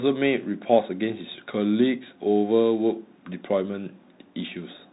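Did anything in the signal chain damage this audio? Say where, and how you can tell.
Yes. The damage is at the codec stage: a Bluetooth CVSD headset codec, audible across the whole speech clip. Nothing above 4 kHz survives. S sounds turn scratchy, and a granular hiss sits underneath. The sound points to a 64 kbps one-bit stream whose adaptive step lags loud, fast changes.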